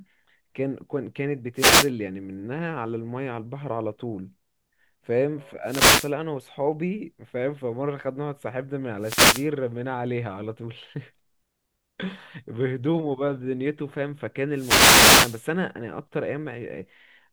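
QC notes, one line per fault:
1.55–1.91 s, 5.64–6.13 s, 8.99–9.49 s, 14.53–15.45 s: wireless microphone noise hit. Four bursts of static swish through the speech, the last and longest close to a second. The FM radio link fades as reflections cancel, so receiver hiss rises.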